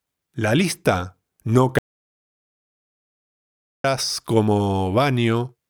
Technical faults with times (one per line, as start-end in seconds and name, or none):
1.79-3.84 audio dropout to silence